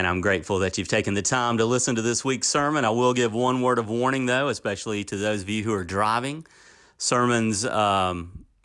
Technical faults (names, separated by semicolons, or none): none